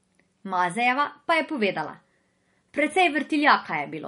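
Throughout the speech, a low-bitrate MP3 encoding was likely saved again as MP3 at a high bitrate. The swirling, smeared texture left by the first pass, which points to about 40 kbit/s, persists, and the second encoding, near 256 kbit/s, restores none of it.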